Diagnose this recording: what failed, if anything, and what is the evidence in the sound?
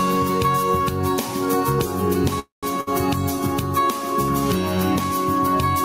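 Gain pumping runs through the whole recording, at the input and call-processing stage. The gain ducks by around 10 dB under each loud sound, so levels are squashed together. That points to gain set far too high, likely driving a fast limiter. A noise gate would cut the background off instead of letting it swell.

A call audio freeze, a network and jitter-buffer fault, runs from 2.39 to 2.65 s. The last sound is stretched into a fading tail that falls to silence for about 150 ms. Playback then continues from where it stopped, with nothing skipped. The sound lands about 0.23 s later than before, which fits a likely stall in packet delivery.

A burst of packet loss hits at 2.81 to 2.89 s, also on the network path. The last sound is held and faded for about 60 ms, then the audio resumes further on with that 60 ms missing. The jump past lost material is what separates it from the freeze just before.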